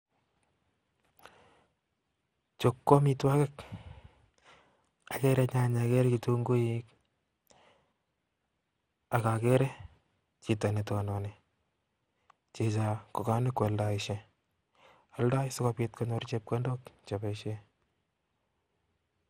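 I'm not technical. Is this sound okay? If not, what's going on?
No. Generation loss runs through the whole of this speech, from start to finish. It sounds swirly, smeared and hollow, and the starts of sounds are blurred. This is likely from the recording being squeezed into a compressed format and unpacked again around ten times. Each round throws away slightly different detail, so the damage piles up. The very top of the sound also stops at about 17 kHz.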